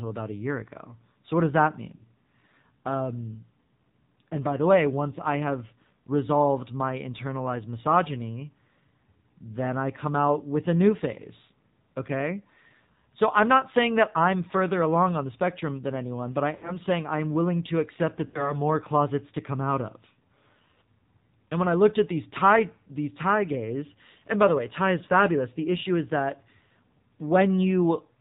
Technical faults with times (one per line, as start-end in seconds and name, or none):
0.00-28.20 AMR narrowband mobile codec
1.96-2.08 lost AMR speech frames
16.56-16.75 lost AMR speech frames
18.26-18.57 lost AMR speech frames